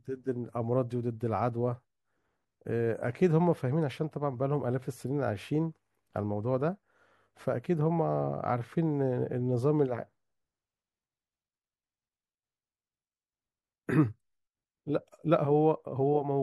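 Throughout the speech, the sound is watery and swirly, with the sibilants turning metallic and chirpy and consonant attacks smeared, likely from MP3 compression at a rate that fits a 64 kbps encode. Short of bits, the encoder cuts the treble at a fixed frequency and drops weak spectral lines. On a spectrogram this shows as a hard, flat ceiling across the whole clip, with isolated blobs of energy flickering on and off beneath it.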